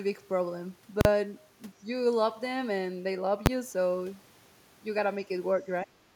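Speech, with two bursts of invalid numbers at full scale and one stretch where speech is suppressed in double talk. From 1.01 to 1.05 s, a calculation has thrown out infinite or invalid values that were clamped to the largest possible sample. The output sits flat at one extreme value for that 40 ms block, so there is a very loud pop where it begins and another where it ends, with nothing between them. The same fault returns at 3.46 s, but this block lasts only 10 ms, so the two edges merge into a single bang. On a waveform, each appears as a flat slab stuck at one extreme value, far beyond the speech peaks. A spectrogram shows bright vertical broadband lines at the block edges and no speech texture inside the longer one. From 5.83 to 6.13 s, the talker drops sharply, by roughly 25 dB at the deepest point, for about 0.3 s. This is likely an echo canceller that could not separate the near talker from the far side's loudspeaker echo and turned both down. 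The waveform envelope shrinks abruptly over that span.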